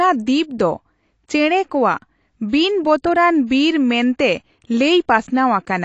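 Speech, throughout which likely low-bitrate AAC compression, consistent with about 32 kbps, removes everything above 8.6 kHz and leaves the sound dull and smeared, with plainly audible coding damage.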